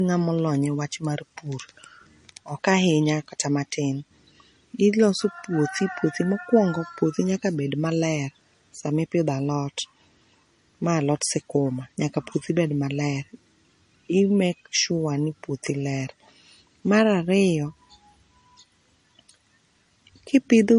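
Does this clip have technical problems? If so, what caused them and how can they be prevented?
Yes. Throughout, nothing sounds above 10.6 kHz. That points to low-bitrate audio saved at a high bitrate, likely MP3 near 40 kbit/s re-encoded much higher. Keep the original source and encode once.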